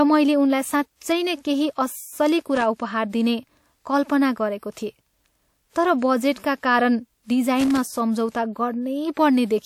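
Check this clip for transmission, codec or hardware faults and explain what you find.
A hardware fault, loose connector crackle, appears twice in the speech: from 2.55 to 2.63 s, between "नै केही अस्सली" and "उपहार दिने कल्पना गरेको", and again from 7.60 to 8.00 s. A worn or dirty contact makes and breaks as it shifts, chopping the signal into irregular bursts of crackle and scratching.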